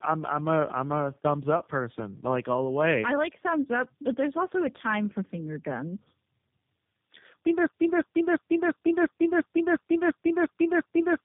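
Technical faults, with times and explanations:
throughout: tandem speech coding, two low-rate speech codecs in a row, which fits AMR-NB then G.729A, each re-coding the last's rough, muffled output; nothing above 3.6 kHz.
7.67 s to the end: broken-record loop, a 349 ms fragment repeating back to back ten times, likely a stalled stream resending its last piece; the intended audio is lost.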